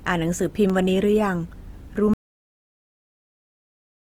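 Throughout the speech, tones sound rough and grainy with a noisy texture while the band stays full up to about 20.2 kHz, likely Opus compression in its CELT mode at a rate near 24 kbps.

Between 0.31 and 0.70 s, three brief CD scratch ticks occur, each under a millisecond, as the player patches unreadable samples on successive disc rotations.

At 2.14 s the sound stops dead into silence, with no room tone, lasting to the end. This is an audio dropout to silence, likely from lost input while recording continued.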